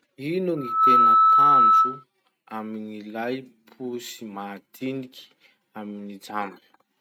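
Loudspeaker feedback squeal runs from 0.57 to 2.04 s. The microphone picks up its own loudspeaker, and at 1.3 kHz the loop gain exceeds one, so a single tone swells over roughly a third of a second into a piercing whistle about 15 dB above the speech.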